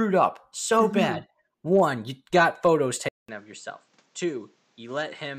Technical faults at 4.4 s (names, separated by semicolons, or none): input switched to a poorer device